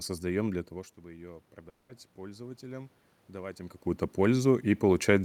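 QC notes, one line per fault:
1.03 s to the end, automatic gain rising: after the level at the microphone drops by about 15 dB, the gain control responds by slowly raising its gain rather than jumping. The sound and the room noise beneath it swell together over the rest of the clip, so the background climbs as the gain rises. The talker's movement near 3.5 s shifts the level again while the gain is still rising.
1.69 to 1.91 s, long network dropout: for about 200 ms the sound turns into a fading buzz or hiss that continues what came just before, with no silent gap. The real audio from that stretch never comes back. When the signal returns, it picks up further on. This is likely a network gap in which no packets arrived, and the receiver filled the whole 200 ms by extending the last sound it had.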